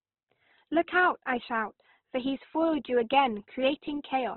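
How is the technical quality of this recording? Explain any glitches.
The recording is heavily degraded throughout, with the speech sounding rough and band-limited from start to finish. The cause is likely Opus compression. Nothing remains above 4.2 kHz, and the encoder has spread its energy across coarse bands, filling missing detail by folding or with noise. Voiced sounds come out grainy and noisy rather than swirly. The result suggests a very low rate, around 12 kbps, in music (CELT) mode. A spectrogram would show a hard ceiling at 4.2 kHz, with blocky, smeared harmonics below it.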